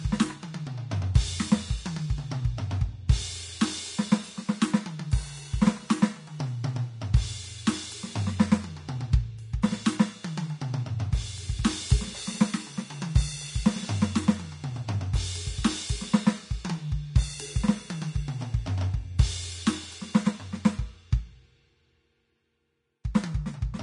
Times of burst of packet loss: none

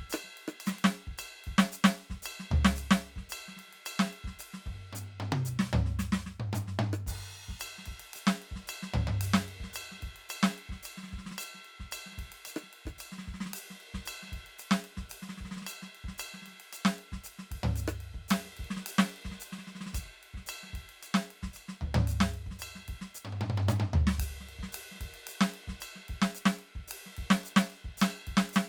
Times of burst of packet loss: none

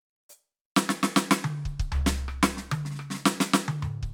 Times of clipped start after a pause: none

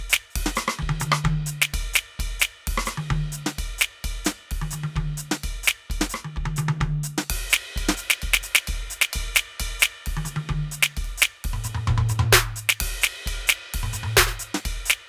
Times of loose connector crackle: none

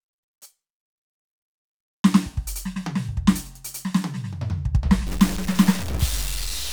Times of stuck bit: 5.07-6.73

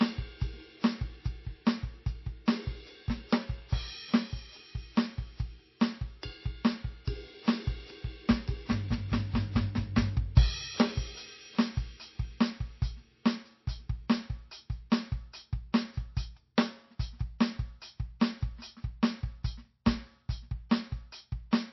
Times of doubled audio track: none

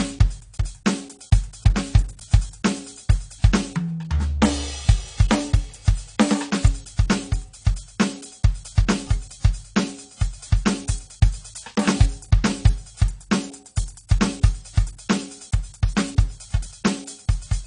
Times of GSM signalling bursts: none

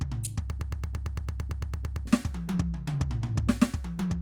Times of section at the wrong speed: none

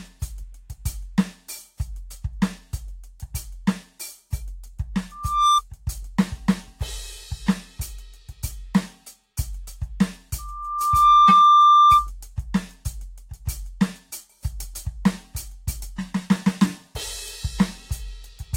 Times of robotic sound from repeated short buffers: none

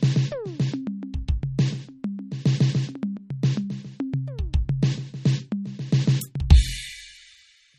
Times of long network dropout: none

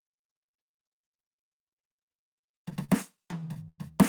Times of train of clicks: none

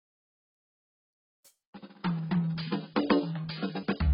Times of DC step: none

